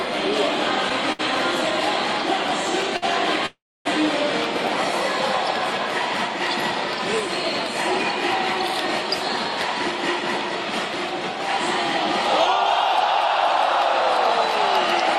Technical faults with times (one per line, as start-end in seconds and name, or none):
1.12-1.21 short stall from a late packet
2.97-3.04 short stall from a late packet
3.46-3.87 call audio freeze